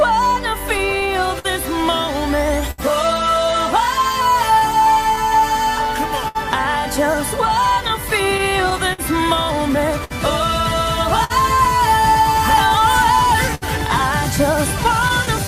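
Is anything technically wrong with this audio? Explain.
Yes. The audio has timing faults caused by packets arriving out of step with playback. They are heard as hiccups, smears and brief dragging rather than lost material.

Clock drift between sender and receiver runs through the whole clip. The sender's clock runs about 5 percent slower than the receiver's, so the jitter buffer keeps draining and the receiver must keep padding the stream to avoid running dry. The result is a faintly unsteady tempo with small recurring catches. On a waveform these appear as occasional slightly elongated segments at uneven spacing, not as any single obvious event.

Repeated timing corrections from 1.06 to 13.27 s are the receiver's response to that drift. It repeats short pieces, playing at about 99 percent speed and adding roughly a tenth of a second overall. Every edit lengthens rather than shortens, but they are unevenly spaced. 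Each is tiny, heard at most as a slight hesitation. On a spectrogram you might see brief duplicated or stretched frames where harmonic patterns hold a little longer than their neighbours.

Scattered short gaps occur in four stretches: 0.59 to 2.80 s (around seven holes, the longest near 70 ms), 4.13 to 6.37 s (around five, longest near 70 ms), 7.88 to 10.12 s (around seven, longest near 50 ms), and 14.84 to 15.47 s (a few very short ones, around 10 ms at most). Each lost or late packet was patched by continuing the last sound, so nothing is cut. What you hear instead is ticks and small smears. A spectrogram shows short flat-topped bands where frequency content freezes instead of evolving.

The short stall from a late packet at 11.24 to 11.32 s lasts 56 ms. One packet missed its deadline and the buffer ran empty, so the receiver held the last sound until it arrived and then resumed from the same point. 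The held sound has a slight buzzy or dipping quality. On a spectrogram it appears as a horizontal smear of frozen partials about 56 ms wide, with the waveform possibly sagging slightly in level.

Repeated stalls (stutter) occur from 12.50 to 13.64 s. The buffer emptied five times, with 103 ms filled in total (about 9 percent of that span) and the longest hold at 68 ms. Each time the receiver extended the last sound, fading the longer ones, before continuing. The passage drags and stutters audibly. A waveform shows a cluster of repeated or decaying segments, and a spectrogram shows several closely spaced frozen bands.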